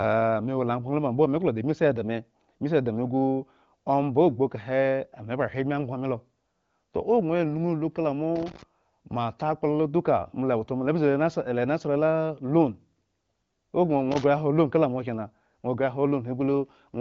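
Loose connector crackle at 8.36 to 8.63 s and again at 14.12 to 14.24 s: a worn contact keeps making and breaking, chopping the speech into an irregular scratchy burst, heard over wideband-codec audio that stops near 7.4 kHz.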